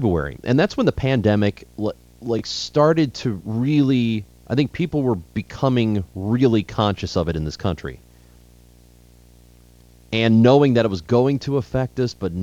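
From start to finish, a screen or video cable is coupling into the audio path, producing video or display buzz: a 60 Hz buzz at the picture's field rate, topped with a layer of hash, sitting roughly 30 dB below the speech throughout.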